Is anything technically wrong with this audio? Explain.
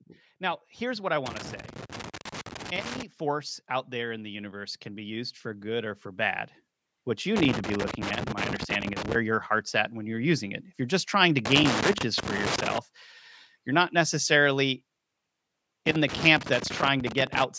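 Yes, there are two problems. Loose connector crackle shows up four times: 1.26 to 3.03 s right after "now here's what I", 7.36 to 9.15 s just before "your heart's at when", 11.45 to 12.78 s following "you're just trying to", and 15.86 to 17.44 s. A worn contact keeps making and breaking, so the signal gets chopped into irregular scratchy bursts. Between 3.19 and 6.45 s there's automatic gain rising. The AGC decided the input was too quiet and raised the gain by about 7 dB, so the voice and the background swell up together over those three seconds. The call microphone processing, which cuts everything above 8 kHz, is working as it should.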